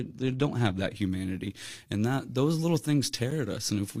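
Pre-emphasis left on from 0.96 s to the end of this speech clip: the CD 50/15 µs treble boost was never undone, leaving highs about 8 dB hot at 10 kHz, thin and sibilant. A gap between stream segments at 3.31 s: mismatched timestamps at a one-second segment boundary leave an 8.3 ms hard-edged silence, with no audio lost.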